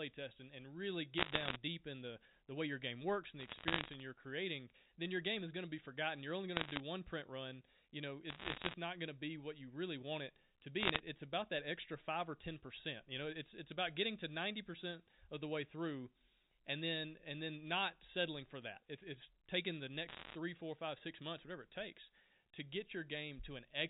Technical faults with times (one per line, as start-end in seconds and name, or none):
1.18-1.56 bit errors on a digital phone line
3.40-4.00 bit errors on a digital phone line
6.56-6.80 bit errors on a digital phone line
8.30-8.74 bit errors on a digital phone line
10.80-11.00 bit errors on a digital phone line
20.08-20.35 bit errors on a digital phone line